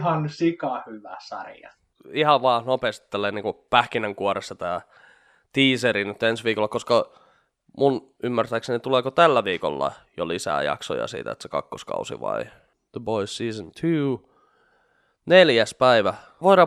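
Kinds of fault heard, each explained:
No technical faults can be heard in this recording.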